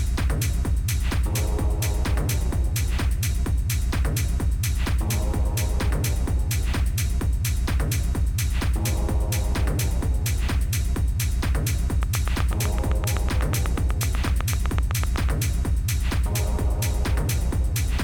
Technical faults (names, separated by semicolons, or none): train of clicks